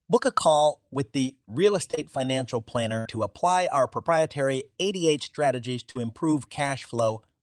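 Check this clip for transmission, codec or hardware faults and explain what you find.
The clip has two kinds of transmission fault, both from lost network packets: three short concealed losses and one longer burst.

Short concealed packet loss occurs at 1.91–1.95 s and 1.95–1.99 s, back to back, and again at 5.91–5.97 s. About 20 ms per event in the first pair, and 40 ms in the last, arrived too late. The decoder extended the preceding sound and blended back, leaving brief smears or wobbles.

A burst of packet loss occurs at 2.99–3.07 s, just before "to apply our proprietary". About 60 ms of audio was lost. The receiver continued the last sound and faded it across the gap, so a held, dying continuation is heard before the sound resumes with that stretch missing.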